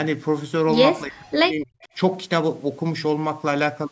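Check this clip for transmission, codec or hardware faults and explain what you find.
Two faults turn up, both tied to echo cancellation on a call.

From 1.0 to 1.81 s there's speech suppressed in double talk. The voice sinks by around 40 dB at its worst and is held down for most of that stretch. The likely cause is the canceller mistaking overlapping talk for loudspeaker echo and ducking it.

Right after, at 1.83 to 1.88 s, a short echo leak slips through. It's a faint copy of the voice delayed 274 ms and sitting about 35 dB down, likely residue the far end's echo canceller didn't fully remove before sending it back.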